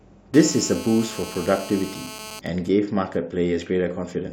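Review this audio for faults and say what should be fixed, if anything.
From 0.34 s to 2.40 s a GSM phone buzz sits under the speech: a hard, raspy tone at 217 Hz with a dense stack of harmonics, about 15 dB below the programme level and unrelated to it. A 2G handset in a call transmits in bursts 217 times a second, and some unshielded input stage rectifies those radio pulses into audio. Keep phones switched off or in flight mode and well away from microphones, cables and preamps during recording.

From 2.46 s to 4.27 s the steady buzz gives way to GSM signalling bursts, a much quieter pattern of even ticks with a longer 217 Hz buzz twice a second, roughly 30 dB down. This pattern comes from a handset on a call while its user is silent, so it sends only short groups of bursts that are again rectified into the audio path. Use shielded balanced cabling and RF-filtered inputs so stray radio bursts cannot be demodulated.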